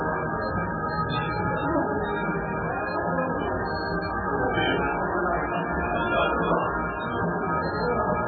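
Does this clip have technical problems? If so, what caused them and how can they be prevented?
Yes. Throughout the clip, MP3 compression at a very low bitrate, which points to something like 8 kbps, is the likely cause. The encoder ran short of bits, cut everything above 4.4 kHz and dropped weak frequency lines frame by frame, leaving the audio dull, heavily watery and swirling, with smeared attacks. Encoding at a much higher bitrate, or keeping an uncompressed master, would prevent it.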